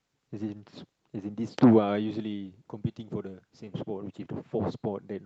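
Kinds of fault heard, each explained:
The speech shows the normal texture of a WebRTC call path, with coding noise and high frequencies that stop at 8 kHz, consistent with an Opus codec, and no fault can be heard in the signal.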